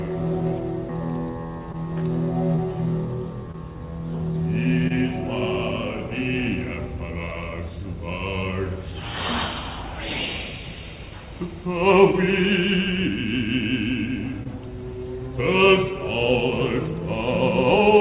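Short concealed packet loss occurs six times, at 1.72, 2.56, 3.52, 4.88, 12.12 and 14.43 s. Each time about 20 ms of audio arrived too late for the decoder, and the receiver covered the gap by extending the preceding sound before blending back into the real signal. Each lasts roughly 30 to 45 ms and is heard as a brief smear or wobble in band-limited audio with nothing above 4 kHz, which fits a G.711 A-law call codec.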